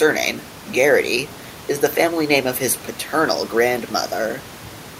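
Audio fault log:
No faults heard.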